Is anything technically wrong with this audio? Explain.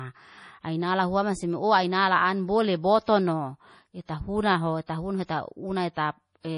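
Yes. The speech carries heavy compression damage throughout, plus four pre-echoes. Nothing sounds above 10.5 kHz. The sound is watery and swirly. This is likely MP3 compression at a low bitrate, around 32 kbps.

Pre-echo occurs at 3.04 to 3.08, 4.06 to 4.09, 4.86 to 4.89, and 5.94 to 5.97 s. Coding noise spreads 25 to 38 ms ahead of sharp attacks. A brief hiss precedes each one, softening it.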